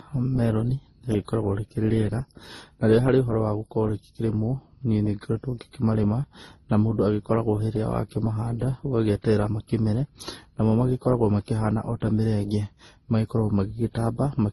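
From start to finish the speech carries two layers of compression damage at once: the artefacts of an MP3 encode heard together with those Opus adds, with nothing above 12 kHz. This points to transcoding between lossy codecs, likely an MP3 encode near 32 kbit/s re-encoded to Opus at a similar rate. A single low-bitrate codec would show only one artefact style; here the second encoder has spent bits on the first one's errors.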